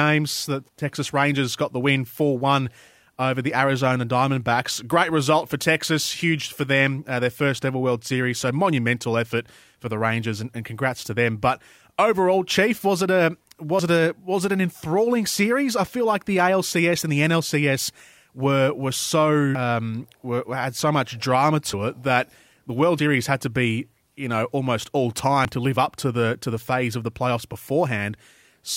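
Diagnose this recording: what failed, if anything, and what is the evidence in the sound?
The speech skips ahead at 13.79 s (after "was it a", resuming on "it a was it"), 19.55 s, 21.73 s (between "had so much drama" and "it that the"), 22.99 s and 25.45 s (between "you know almost all" and "to live up to"). Each loses roughly 50 to 150 ms. The fault is at the driver or buffer stage, likely a dropped buffer (overrun): samples were overwritten before being read, and the remaining ends were joined. A dropout would leave a silent gap, but here none is heard.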